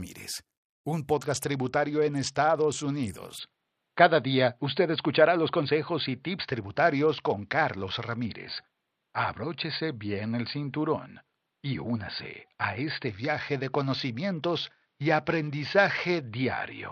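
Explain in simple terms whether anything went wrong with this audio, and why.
Several things go wrong in this speech. From 1.13 to 3.10 s, 6.44 to 8.25 s and 13.08 to 16.25 s there is a Bluetooth SBC bit pool drop. The wireless link got crowded, so the phone sent far less detail. The voice turns dull and gritty, then recovers.

At 3.38 s the sound changes for the rest of the clip, with no gap. Everything above 4.7 kHz is gone, the level shifts slightly, and a faint new background noise appears. The likely cause is the input switched to a poorer device.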